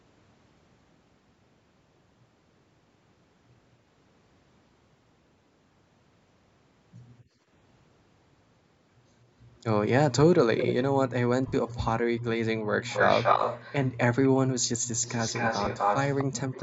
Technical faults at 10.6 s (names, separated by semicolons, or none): echo leak